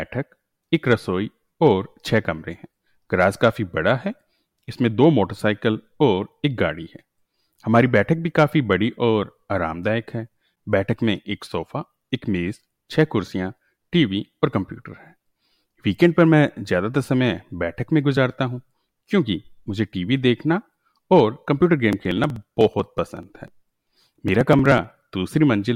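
From 21.93 s to 25.09 s the speech has periodic USB or driver dropouts. Every 62 ms, the driver stalls briefly and about 2 ms of audio is skipped. The result is a steady run of around fifty small ticks, audible only while sound is present.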